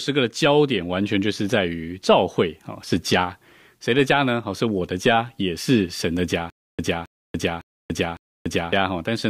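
A speech clip with a stutter with silent gaps from 6.5 to 8.73 s: a 270 ms burst repeats four times, each followed by about 290 ms of dead digital silence, every 0.56 s. Likely a stalled stream replaying its last fragment, so the audio meant for that stretch is gone.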